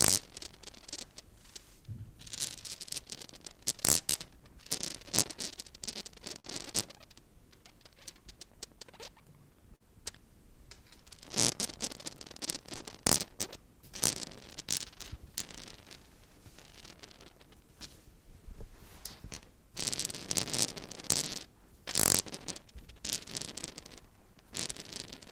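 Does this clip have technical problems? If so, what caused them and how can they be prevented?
Yes. At 6.39 to 6.47 s there's a burst of packet loss. About 40 ms of audio never made it to the receiver in time, so it stretched the last bit of sound for roughly 46 ms and faded it. You hear a short held buzz or hiss, then the sound picks up a little further along with that slice gone. The usual fixes are a bigger, adaptive jitter buffer and forward error correction, which help the network ride out a run of lost packets.

Short concealed packet loss shows up twice, at 9.76 to 9.83 s and again at 12.76 to 12.83 s. Each time about 40 ms went missing, and the decoder patched roughly 39 ms by carrying on the previous sound and blending back into the real signal. It comes across as a quick smear or wobble rather than an obvious gap. Running on a steadier connection with less congestion, ideally wired rather than Wi-Fi, and turning on codec FEC should cut these down.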